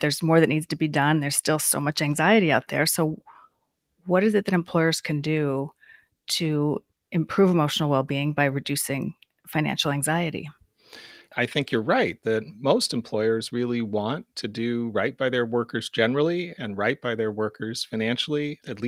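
A recording of speech, with nothing technically wrong to be heard anywhere in it. No fault can be picked out at any point.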